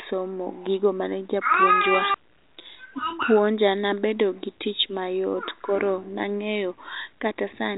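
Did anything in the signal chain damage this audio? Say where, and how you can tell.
No, nothing in the chain seems to have harmed this speech; the top end stops at about 3.8 kHz, as expected on a G.726 ADPCM telephone path, and the absence of any audible coding roughness fits the codec running at 40 kbit/s.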